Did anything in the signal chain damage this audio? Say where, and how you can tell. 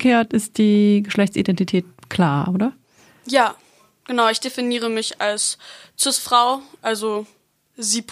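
No, nothing in this recording stood out on listening as damage from any stage of the signal chain.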